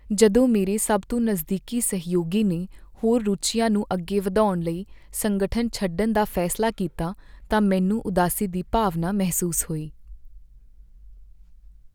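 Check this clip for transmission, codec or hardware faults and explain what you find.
Nothing in this speech recording points to a transmission, codec or hardware fault.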